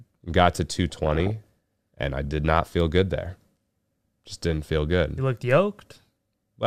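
A speech clip with DAB burbling from 0.90 to 1.46 s, between "got to" and "and I did not". Weak reception let bit errors, around one percent, through error correction, corrupting MP2 sub-band samples and scale factors, so bands jump frame by frame and pick up short blips of noise.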